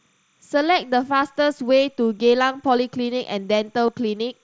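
It's a short speech recording with a faint timecode bleed running the whole way through. A 29.97 fps linear timecode signal leaks in as a chirpy warble around 1 and 2 kHz, sitting well down, roughly 45 dB under the speech. There are also two concealed Bluetooth headset packet losses, at 1.21 s and 3.87 s. The receiver patched the gaps of about 7.5 ms and 15 ms by repeating recent waveform, which fits one and then two dropped frames. The first is nearly invisible, and the second leaves a tiny buzzy catch. All of this rides on a wideband mSBC headset link, with its light graininess and speech topping out near 8 kHz.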